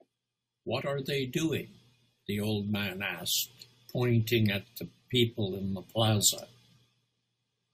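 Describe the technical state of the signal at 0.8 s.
At 0.80 s, compressed frames are skipped in this speech clip. The decoder never outputs a short run of coded frames, either because they are missing from the stream or because it discarded them as corrupt. The audio jumps forward by roughly two frames, around 50 ms, consistent with a frame length of about 23 ms. The join is heard as a small jump in the speech.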